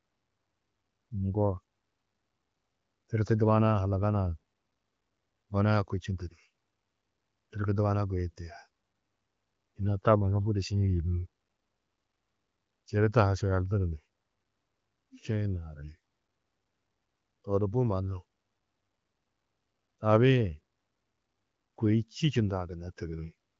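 Nothing here needs fixing: the speech comes over the HD Voice wideband line with its top end stopping near 7.5 kHz, and it sounds like AMR-WB working at a high rate, around 23.05 kbit/s.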